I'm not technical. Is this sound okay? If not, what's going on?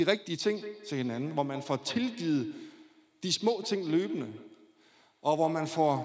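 No. From 0.39 seconds to the end, there is feedback echo between two devices. Two devices on one call share a room. One plays the other's sound, and that microphone catches it again. So the speech returns roughly every 0.15 seconds, thin and ringing.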